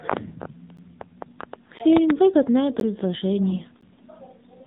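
AMR narrowband mobile codec damage runs through the whole speech clip: everything above 4 kHz is missing, and the voice sounds buzzy and synthetic, which fits a low mode around 7.4 kbps. Gaps between chunks cut the sound at 0.77, 1.79, 2.80 and 3.81 s. Each is a hole of about 13 ms, repeating every second. AMR bit errors from 3.50 to 3.64 s make the voice hoarse and gargly while its pitch and level hold. This fits about seven frames arriving with a few percent of their less protected bits flipped, which scrambles the pulses that drive the voice model.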